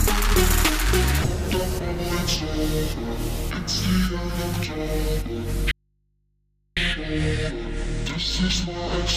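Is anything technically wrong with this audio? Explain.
Yes. From 5.71 to 6.77 s there is an audio dropout to a faint residue: the signal feed was likely interrupted while the path after it stayed live. For about 1.05 s the sound cuts out abruptly, leaving only mains hum roughly 45 dB below the normal level.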